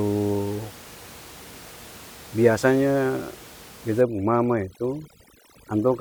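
Speech with room noise sitting about 21 dB below the voice. From 4.01 s to the end, overdone noise removal sets in: the background drops and breaks up into twinkling specks, and quiet parts of the voice are suppressed.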